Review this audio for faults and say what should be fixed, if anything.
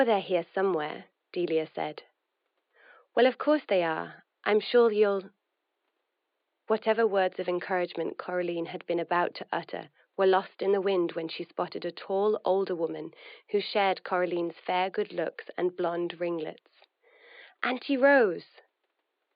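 Nothing here needs fixing.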